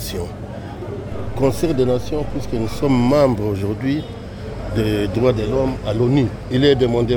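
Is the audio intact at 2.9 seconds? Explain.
No. At 2.9 seconds the audio sits inside a DC step that runs from 1.12 to 3.16 s. A low thump or click marks its onset at 1.12 s, while the sound itself carries on unchanged. The waveform's zero line has jumped to an offset of about −29 dBFS, as a converter recalibrating or an offset input being switched in would do. That displacement is still present at 2.9 s.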